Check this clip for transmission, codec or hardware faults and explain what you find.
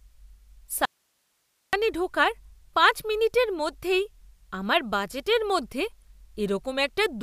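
There is one fault, an audio dropout to a faint residue. From 0.85 to 1.73 s the speech cuts out abruptly for about 0.88 s. Only hiss remains, roughly 45 dB below the speech. The signal was likely lost upstream while the path after the break stayed live.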